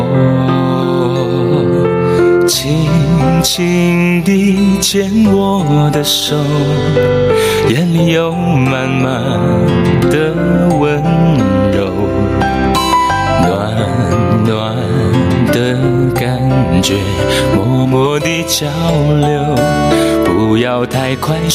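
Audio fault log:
throughout gain pumping: the gain ducks under every loud sound, swinging around 15 dB and squashing loud and soft parts together, likely from a fast limiter fighting excessive input gain. Unlike gating, the background never drops out.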